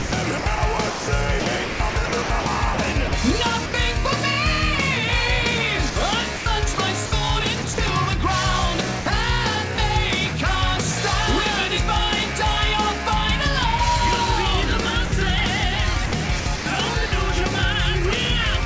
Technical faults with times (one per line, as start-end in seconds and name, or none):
0.00-3.12 sound chopped by the voice detector
3.66-3.74 sound dropped by the voice detector
5.90-7.78 sound chopped by the voice detector
9.00-9.06 sound dropped by the voice detector
9.76-9.78 sound dropped by the voice detector
15.06-15.12 sound dropped by the voice detector
16.06-17.12 sound chopped by the voice detector